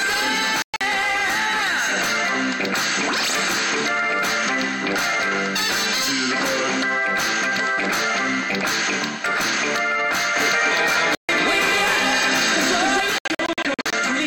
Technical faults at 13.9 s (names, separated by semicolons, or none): Bluetooth dropout